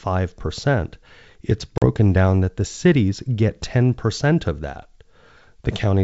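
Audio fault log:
1.78–1.85 s, packet loss on an ADPCM call: a hard-edged silent hole of about 40 ms, fitting roughly two lost packets, then an unsettled restart at "down that the cities", as the decoder's adaptive predictor and step size, out of step with the sender's, resynchronise.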